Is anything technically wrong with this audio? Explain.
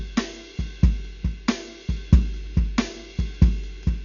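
Yes. All the way through, the music is heavily coded and sounds dull, with nothing above 6.9 kHz. There's a rough, fluttering noise hanging around the tonal parts. That's likely Dolby Digital compression pushed hard, which fits a bitrate near 48 kbps. Starved of bits, the encoder narrows the band and leaves many frequency lines with no detail at all, and the decoder fills those gaps with noise, which is where the grainy flutter comes from.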